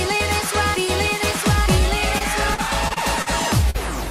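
From 2.18 to 3.28 s there is repeated packet loss, heard as a robotic sound. Packets kept failing to arrive in time across this stretch. Each hole was filled by extending the sound that came just before it. The holes were short, none longer than 40 ms, but they came close together. Together they total about 140 ms, roughly an eighth of the span. The result is choppy, with small pieces missing.

At 3.70 to 3.76 s comes a short concealed packet loss. About 40 ms of audio never reached the decoder in time. The receiver filled the hole by continuing the preceding sound for about 42 ms, then blended back into the real signal. It is heard as a brief smear or wobble rather than a clean gap.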